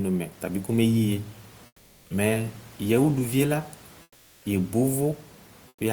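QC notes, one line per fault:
1.66–2.10 s, 4.02–4.44 s, 5.68–5.80 s: comfort noise in place of the background. The sending side likely stopped transmitting during pauses in the speech (Opus DTX). The receiver filled each gap, lasting 440, 420 and 120 ms, with generated noise. The room's own background, sitting about 30 dB under the speech, drops out. A flat, textureless hiss takes its place, about 7 dB quieter in the first two gaps and about 9 dB quieter in the last.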